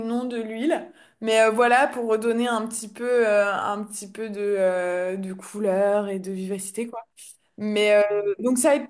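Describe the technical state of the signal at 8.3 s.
At 8.3 s the speech signal is intact, with no audible technical fault at that moment.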